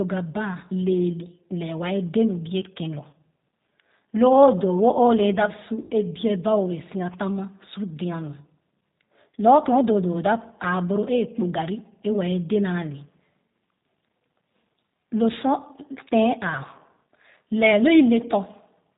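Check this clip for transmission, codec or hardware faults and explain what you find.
Two faults are audible: low-bitrate speech coding across the whole recording, and two short dropouts patched over by the decoder.

G.729 codec, throughout: the speech is band-limited with nothing above 4 kHz, and it has a plainly audible rough, slightly synthetic texture. That sound fits an 8 kbit/s G.729A-type coder, which does not send the waveform. It rebuilds each 10 ms frame from a vocal tract filter, a pitch predictor and a handful of pulses, so fine detail is lost and the timbre turns buzzy.

VoIP packet loss concealed by the speech codec, at 3.10–3.15 s and 5.82–5.92 s: the first gap follows "bie ken lor" and covers about 30 ms of missing audio, which fits a single lost packet. The second follows "o le da si", spans about 90 ms, and points to roughly three consecutive packets, with speech resuming at "a biɛ ba o". 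In both places the decoder had no data, so it kept extending the last pitch and filter at falling gain. This produces a brief stretched sound, a buzzy tone or coloured noise, that fades. After each gap the voice stays weak or distorted for a while once packets return, because each rebuilt frame depends on the previous one.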